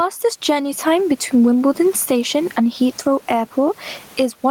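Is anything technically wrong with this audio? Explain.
Yes. Gain pumping runs throughout: the gain swings by roughly 15 dB, squashing loud and soft parts closer in level, likely from excessive gain feeding a fast limiter. The room noise, about 38 dB below the speech, is ordinary background in the room rather than a fault.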